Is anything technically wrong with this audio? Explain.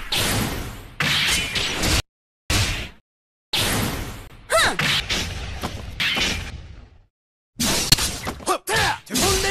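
Yes. Between 2.0 and 3.0 s, and again between 5.0 and 6.5 s, there are chunks out of order. A 500 ms block plays one slot late, then two slots late, giving a jumbled passage. Unlike a dropout, nothing is missing.

At 4.27–4.32 s and 7.90–7.94 s, a corrupt frame is muted. A damaged frame, likely a single one, was rejected and replaced with silence, leaving an abrupt gap of about 40 ms. Unlike the reordering, this is an empty hole rather than shuffled sound.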